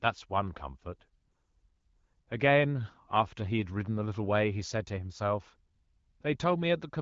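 No faults found; the speech has passed through the AMR wideband (HD Voice) codec at 12.65 kbit/s, with only light coding texture and no content above about 7.4 kHz.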